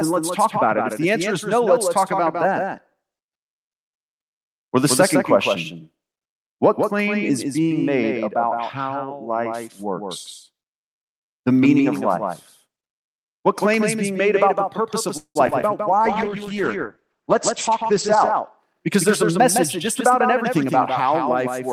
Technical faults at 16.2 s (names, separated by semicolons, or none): doubled audio track; jitter buffer slow-down; call bitrate drop